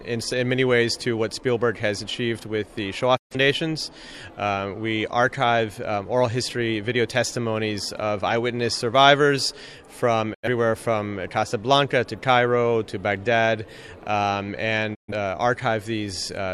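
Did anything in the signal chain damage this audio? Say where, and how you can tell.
Yes, a digital broadcast dropout at the receiver: the sound fades out over 20 ms into silence at 3.16–3.36 s, 10.33–10.48 s and 14.94–15.13 s. The receiver muted on bad frames. Gaps of 128, 85 and 128 ms fit three, two and three lost frames.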